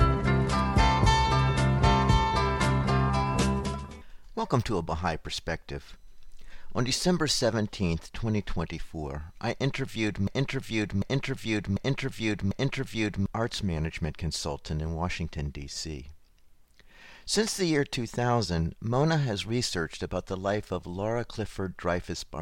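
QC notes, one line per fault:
10.27–13.26 s, broken-record loop: a 0.75 s fragment of the audio repeats exactly, back to back, four times, giving a rigid stuttering cycle of about three seconds in place of forward progress. The likely cause is a stall in the player, encoder or stream, which kept re-sending the last fragment it held in its buffer. Whatever audio belonged in that span never arrives and is lost.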